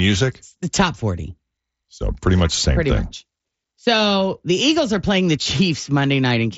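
A brief buzzy hold at 2.55 s, just before "same pretty thing much", and a longer one at 5.43–5.46 s after "are playing the" are concealed Bluetooth headset packet loss. Lost packets, about 15 ms and then 30 ms of them, were replaced by a repeated stretch of recent waveform, which leaves a held tone and a slight warble at re-entry, all carried through the mSBC headset codec.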